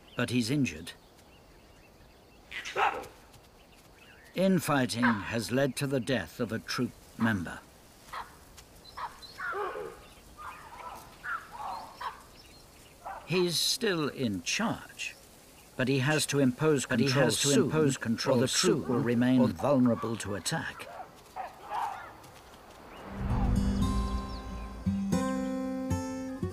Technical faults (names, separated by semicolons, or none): doubled audio track